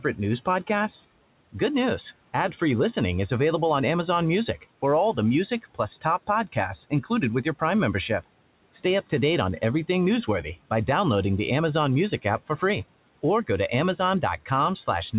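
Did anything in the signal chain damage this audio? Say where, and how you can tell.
Yes. At the call-processing stage, the noise suppressor cut speech between 6.9 and 7.11 s, pulling a brief stretch down by about 12 dB alongside the room noise. It's a gain dip, not silence or a click, so it isn't packet loss; the 4 kHz band limit stays unchanged throughout.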